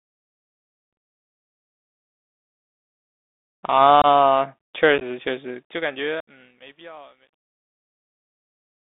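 Speech heard through a Bluetooth CVSD headset codec, with the damage plainly audible throughout. The line is held to roughly 200 Hz to 3.7 kHz, so a spectrogram shows a hard ceiling with empty space above it. The one-bit delta modulation, consistent with a 64 kbit/s CVSD link, leaves a granular hiss beneath the speech, and its adaptive step can't keep up on loud, bright sounds, which come out scratchy and distorted. Unconcealed Bluetooth headset packet loss punches silent holes at 0.93 to 0.97 s (45 ms) and 4.02 to 4.06 s (22.5 ms). A scattered cluster at 4.98 to 5.03 s loses 18.8 ms in total, with the longest gap 11.2 ms. The longest dropout runs 71 ms, from 6.20 to 6.28 s, which fits something like twenty lost packets. On the waveform these are flat gaps with sheer edges. In the spectrogram they appear as blank vertical slots through every frequency, and each is followed by a moment of quieter level as the codec recovers. 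A fade-out runs to 8.83 s, and under it truncation distortion sets in from 5.31 s, which fits a level stage keeping only about 11 bits without dither. From 6.54 s to the end the quiet tail turns gritty. A zoomed waveform shows it reduced to a few square steps, and the spectrogram shows harsh broadband specks instead of a clean decay.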